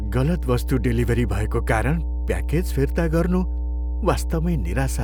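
A steady mains hum runs under the speech from start to finish. It sits at 60 Hz, a low, constant drone with a few low harmonics above it. Power-line current has leaked into the signal path. A ground loop or a transformer close to the cabling would do this. The hum is roughly as loud as the speech itself. It never fades between phrases, so the pauses are filled with the drone.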